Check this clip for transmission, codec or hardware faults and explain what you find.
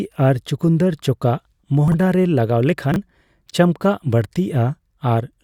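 Two brief ordering faults stand out, both of the kind known as chunks out of order. From 1.88 to 1.94 s, just before "ᱨᱮ ᱞᱟᱜᱟᱣ", a 20 ms chunk plays two chunks late. From 2.92 to 2.96 s, just after "ᱨᱮ ᱞᱟᱜᱟᱣ", another 20 ms chunk plays one chunk late. Nothing is missing. Each displaced block is written after audio that should follow it, leaving three hard joins per event. The result is a quick jumbled flutter. A waveform shows abrupt discontinuities at each join, and a spectrogram shows thin vertical broadband lines with harmonics that jump out of sequence.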